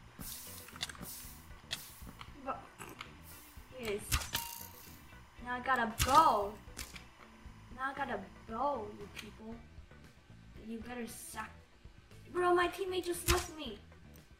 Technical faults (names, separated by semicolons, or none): timecode bleed